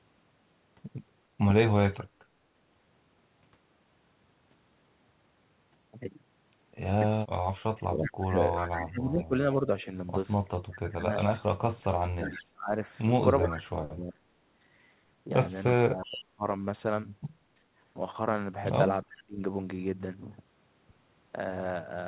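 A speech clip over a call, with the usual narrowband sound of G.711 mu-law, nothing above 4 kHz. Between 7.72 and 16.44 s you get speech suppressed in double talk. The voice keeps ducking, by about 25 dB at its deepest, for around 4 seconds in total across that stretch. There's another brief dip at 19.05 to 19.42 s. That's likely the echo canceller hearing both sides at once and clamping down on the near talker along with the echo. Tangled up with that is echo leak. A faint delayed copy of the voice, roughly 374 ms behind and about 15 dB down, comes through at 7.77 to 10.74 s, 12.26 to 13.62 s and 16.04 to 16.24 s. A quieter scrap, about 25 dB down, shows up at 19.12 to 19.24 s. Most likely a speakerphone on the far end is letting its own pickup slip past cancellation and sending it back.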